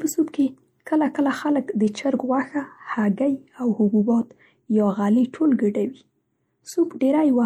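Speech with MP3 compression damage all the way through: watery, swirly texture and a dulled top end, likely from a low-bitrate MP3 encode, fitting roughly 64 kbps.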